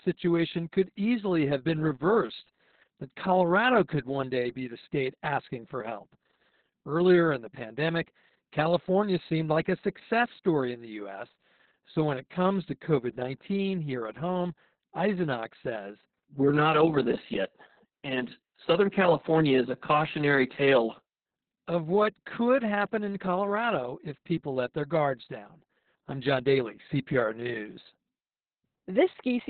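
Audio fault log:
Throughout: Opus voice compression, heavy. The speech has been squeezed through Opus in its SILK linear-prediction mode at what sounds like about 6 kbps, narrowband, probably with long 60 ms frames. At that rate the coder keeps only the telephone band, so nothing survives above about 4.4 kHz, and the excitation is coded so coarsely that the voice comes out muffled, hoarse and faintly robotic.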